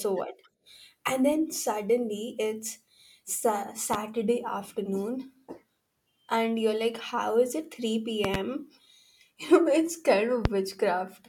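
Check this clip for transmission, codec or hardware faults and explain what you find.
The speech is interrupted by four loud pops, hardware-type faults layered over it. They occur at 3.94 to 3.97 s, as a double pop at 8.25 to 8.37 s, and at 10.45 to 10.48 s, peaking roughly 15 to 20 dB above the speech. A voltage pulse, likely from a plug, switch or static discharge, adds a thump while the speech continues underneath. That continuity distinguishes them from dropout clicks.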